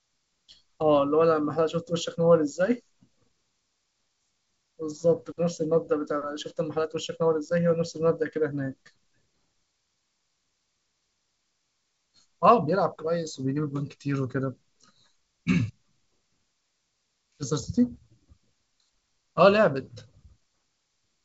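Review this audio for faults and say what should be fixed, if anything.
Nothing here needs to be fixed, since the speech has no faults.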